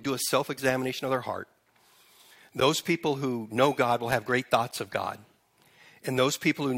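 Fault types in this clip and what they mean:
Gap between stream segments: a hole of about 10 ms of hard-edged silence at 2.60 s, just before "people who know", where two segments' timing fails to meet and the player inserts silence. Unlike a dropout, nothing is missing; the sound resumes exactly where it stopped.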